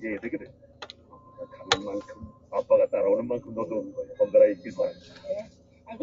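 A speech-tuned noise suppressor runs over the whole recording, treating steady tones and fading tails as background noise. Its gain moves by around 15 dB as it decides what to keep, so sustained material pumps and thins while sudden onsets pass largely intact. The audio also comes through the call's microphone processing, whose high-pass filter takes out only the lowest bass.

The first sound cut by the noise suppressor runs from 0.44 to 1.56 s, covering most of that stretch. Held and decaying content there sinks by up to about 10 dB, so the sound seems to shrink away mid-note and its tail is clipped short. A second, briefer cut follows at 2.13 to 2.52 s, again reaching about 10 dB of reduction, and the sustained part dips audibly while the attack stays full.

At 3.47 s a single sharp click is heard, a thin vertical line across the spectrum. The waveform jumps abruptly, likely because of dropped samples, a loss of only a handful of samples, far too brief to remove anything audible.

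Near the end the suppressor cuts twice more. From 4.94 to 5.25 s the level drops by about 7 dB, and from 5.45 to 5.88 s by about 10 dB. Both are heard as the sustained sound collapsing early and fluttering down, leaving onsets standing out against a hollowed decay.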